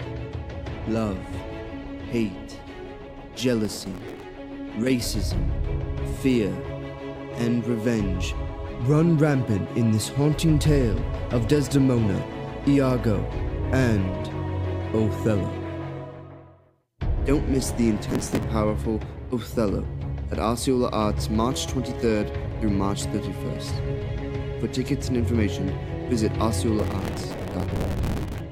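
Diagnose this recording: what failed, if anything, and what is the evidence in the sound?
What failed is the driver/buffer stage, with processor overload crackle in three bursts: 3.65 to 4.23 s, 18.10 to 18.43 s, and the longest from 26.79 to 28.41 s. Each burst is a gritty tearing layered over the sound, made of tiny repeated slivers with hard edges. It sounds like the processor kept missing its deadlines on buffers of around 5 ms, replaying stale audio each time, dozens of misses in a row, and well over a hundred in that last stretch.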